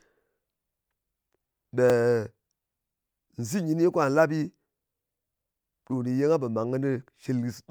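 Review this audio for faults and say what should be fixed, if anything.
There's a repeated buffer at 1.9 s in this speech: a tiny 1.33 ms slice plays twice because new audio didn't arrive in time, which fits a 64-sample buffer. It's so short it comes across as a click, with essentially nothing lost. To prevent it, give the playback path a bit more buffer headroom or keep the audio thread from being starved.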